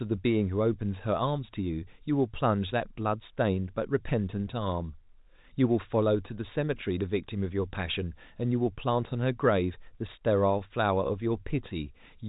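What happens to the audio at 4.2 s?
At 4.2 s the speech runs on intact, with nothing at that moment beyond the narrow telephone band of its G.711 coding, which leaves nothing above about 3.8 kHz.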